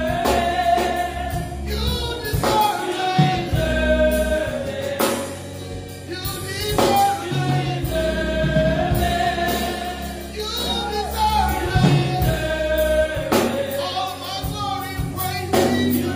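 No technical faults are audible.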